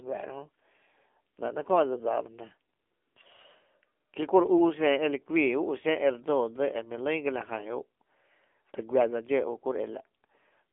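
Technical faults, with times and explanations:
Throughout, AMR narrowband mobile codec: the speech passes through a low-rate mobile speech coder, leaving it buzzy and synthetic with a telephone-line band of 250 Hz to 3.5 kHz. The coding damage is plainly audible, which fits a bitrate near 8 kbps. The voice is rebuilt from a vocal-tract model driven by a few pulses in each 5 ms. A spectrogram shows nothing above 3.5 kHz and an empty strip below 250 Hz.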